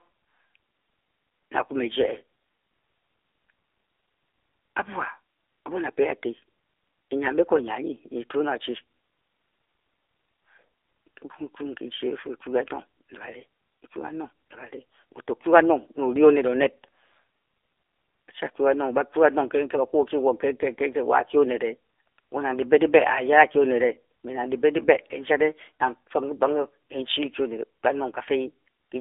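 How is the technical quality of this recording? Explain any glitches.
Poor, narrowband throughout. For the whole recording the speech is muffled and buzzy, audibly synthetic, with nothing above 3.8 kHz: AMR narrowband mobile codec encoding, likely at a low mode around 7.4 kbps, rebuilding the voice from a coarse vocal-tract model.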